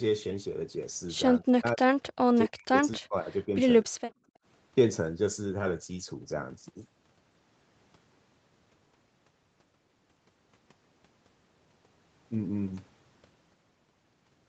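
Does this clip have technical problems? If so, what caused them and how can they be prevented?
Yes. From 1.4 to 1.86 s, 2.33 to 3.56 s and 3.85 to 3.92 s the speech dips sharply, by roughly 40 dB at its deepest, and breaks up in pieces. This is speech suppressed in double talk, likely caused by both ends talking at once: the echo canceller couldn't separate the local talker from the far-end echo and turned everything down. Unlike simple gating, the speech itself is chopped. Better double-talk detection, or a canceller tuned for less aggressive suppression, would prevent it.

From 4.2 to 4.44 s the room sound drops by about 20 dB and then returns. This is background gated by the echo canceller, which clamped the microphone while the loudspeaker played and released it afterwards. What sets it apart from the double-talk fault is that it is the room sound that dips. Gentler suppression with comfort noise filling the gap would keep the background steady.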